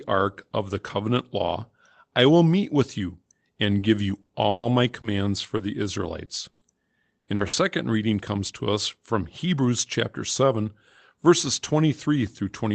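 Repeated packet loss (robotic sound) occurs from 3.71 to 5.61 s and again from 6.25 to 7.55 s. Audio chunks drop out in quick succession, and each hole is filled by stretching the preceding sound. With gaps up to 140 ms and 100 ms, the speech turns choppy, with pieces missing.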